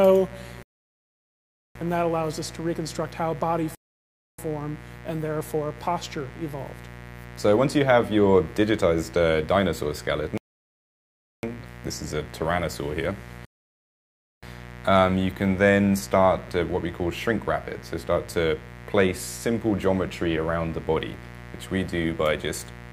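A steady, raspy mains buzz built on 60 Hz sits roughly 15 dB below the sound throughout. Its sharp switching harmonics reaching into the kilohertz range set it apart from a smooth, pure hum. Rebuffering stalls cut the audio to silence at 0.63–1.75 s, 3.75–4.38 s, 10.38–11.43 s and 13.45–14.43 s, adding about 1.1, 0.6, 1.1 and 1.0 s. Unlike dropouts, each gap resumes exactly where it stopped, with nothing lost.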